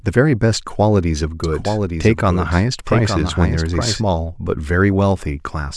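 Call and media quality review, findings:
Doubled audio track, 1.44–4.02 s: speech overlaid by a second full-band copy about a second behind, about 5 dB down, dry, abrupt on/off. Likely a slower duplicate capture path.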